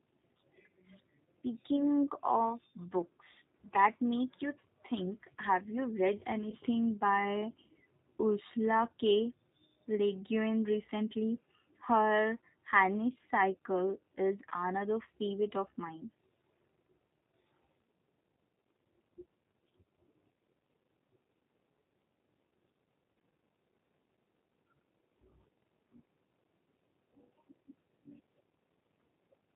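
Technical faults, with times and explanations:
Throughout: G.729 codec. The speech sounds band-limited and slightly rough and synthetic, with the coding damage plainly audible and nothing heard above 4 kHz. The coder rebuilds each 10 ms frame from a vocal tract filter, a pitch predictor and a few pulses rather than the waveform itself, which fits an 8 kbit/s G.729A coder and explains the rough, synthetic quality of the voice.
6.50–6.57 s and 14.49–14.51 s: VoIP packet loss concealed by the speech codec. Right after "think have you read", and again just before "another favorite of mine", the voice briefly smears into a stretched, fading sound, with the first instance audibly weakened for about three times as long. About 20 ms of audio went missing each time, consistent with a single lost packet. The decoder filled the gap by extending its last pitch and filter at falling gain, and because each frame builds on the previous one, the speech takes a moment to recover.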